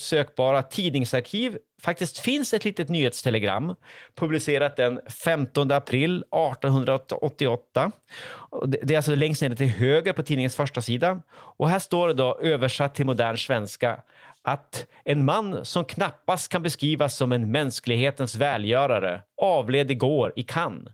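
The speech has no technical faults, and the Opus voice compression it passes through sounds like a hybrid mode at full bandwidth, with only light coding damage.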